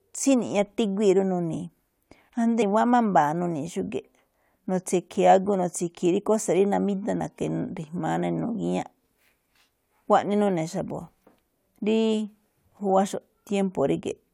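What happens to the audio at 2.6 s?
At 2.61 s the decoder drops compressed frames: a short run of the encoded stream never reaches the output, whether missing from the file or rejected as corrupt. Playback jumps ahead by roughly 50 ms of speech, which fits two lost frames of about 23.2 ms each. The speech on either side of the gap is joined directly, so it is heard as a brief skip forward.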